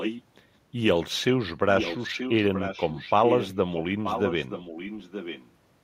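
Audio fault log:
0.00–0.22 s, 1.75–3.83 s, 4.03–5.51 s: echo leak. The speech returns about 0.93 s late, roughly 5 dB down at first and then about 10 dB down. The likely cause is a far-end loudspeaker whose echo canceller let its microphone pickup through.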